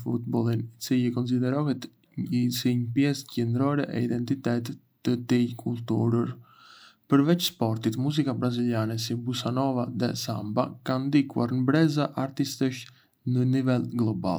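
No technical faults can be heard anywhere in the speech.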